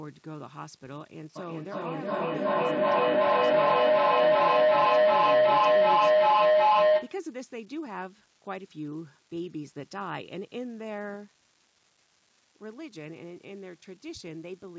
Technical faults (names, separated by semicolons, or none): unreliable data bit; feedback howl